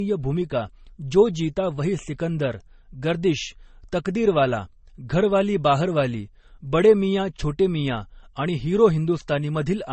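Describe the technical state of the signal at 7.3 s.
At 7.3 s the speech shows likely transcoding between lossy codecs, present throughout. Nothing sounds above 8.4 kHz, and two different compression artefacts smear together. This fits low-bitrate MP3 followed by Vorbis.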